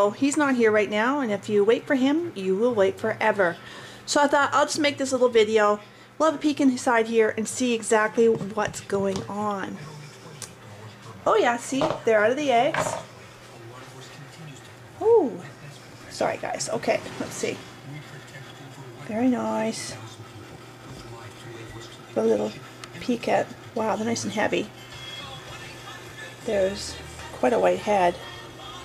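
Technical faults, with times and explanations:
Nothing technical stands out here; the whole recording comes across without any audible glitch or problem.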